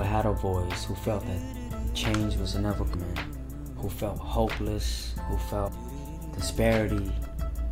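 Compressed frames are skipped twice: whole frames go missing or are rejected, so playback jumps ahead. At 2.93 s about a fifth of a second vanishes, and from 5.67 to 5.69 s about 0.4 s, fitting roughly ten and twenty 23 ms frames.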